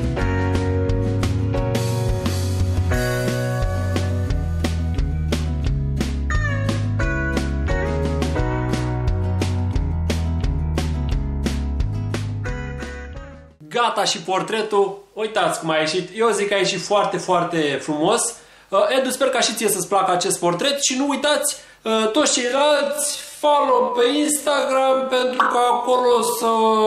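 From 22.39 s to the end at 26.86 s there's a time-stretched section, slowed to about half speed (0.504×). The pitch holds steady while the pace suddenly drags. Likely software repeating short chunks to fill out the length.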